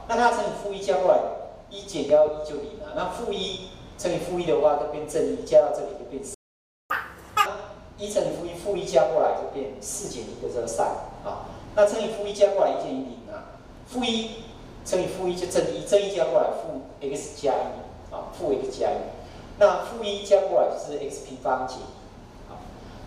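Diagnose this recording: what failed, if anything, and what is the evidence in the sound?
Loud pop, 2.10 to 2.30 s: two sharp pops sit on top of the sound, peaking roughly 5 dB above it, while the audio continues underneath. The likely cause is an electrical transient in the analogue wiring, such as a plug or switch, shaped into a brief pulse.

Playback stall, 6.34 to 6.90 s: the output drops to silence for about 555 ms in mid-flow, then resumes. This points to the player's buffer running dry, or its thread being blocked, at the playback stage, likely a buffer underrun in the driver.

Catch-up at higher speed, 6.90 to 7.46 s: straight after the gap, the sound runs at double speed, with pitch raised by roughly ten semitones, then drops back to normal. The player is resampling its backlog to win back the time lost in the stall.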